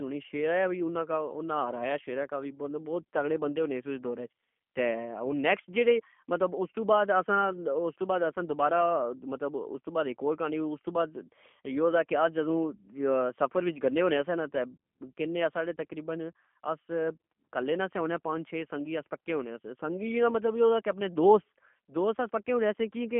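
From start to finish the speech carries G.729 codec damage, plainly audible, with a slightly rough, buzzy, synthetic edge, which fits G.729A at 8 kbit/s. The codec discards the waveform itself and resynthesises each 10 ms frame from a vocal-tract filter, a pitch predictor and a few pulses. On a spectrogram the energy sits in a telephone band of roughly 200 Hz to 3.4 kHz, with nothing above, and the harmonics look smeared and blocky rather than cleanly striated.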